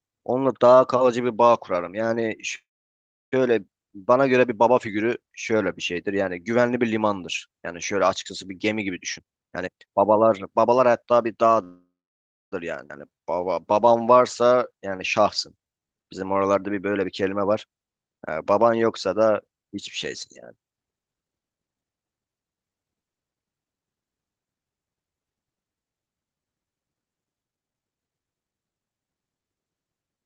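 At 2.55 s the speech stops and the last sound carries on briefly as a fading buzz before dropping to silence, with about 680 ms of the 766 ms pause fully silent; speech resumes at 3.34 s exactly where it left off. This call audio freeze likely comes from packets stalling in transit so the jitter buffer ran dry. The receiver stretched the final sound to cover the wait, then continued without losing anything, adding 766 ms of delay.

From 9.17 s to 11.34 s the speech rushes along at about 135% of normal pace while the pitch stays put, so it sounds hurried rather than chipmunk-like. This is a jitter buffer speed-up. Too much audio had built up in the buffer, so the receiver trimmed it by cutting out short pitch-period slices again and again, removing roughly 0.7 s in total to bring the delay back down.

A second call audio freeze runs from 11.64 s to 12.54 s. The sound again trails off into a fading buzz and then about 610 ms of silence before resuming intact, pushing the delay out by a further 879 ms.

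Between 12.88 s and 12.92 s playback jumps forward abruptly, with the two sides spliced together almost seamlessly. This skip ahead drops roughly half a second of speech. A stretch of audio was discarded while later packets were already queued, so the listener hears a sudden discontinuity instead of a gap.

From 13.1 s to 16.6 s the speech drags at about 89% speed at unchanged pitch, with drawn-out sounds. This jitter buffer slow-down came from the receiver repeating individual pitch periods and slivers of pauses to rebuild its reserve, padding in 398 ms altogether.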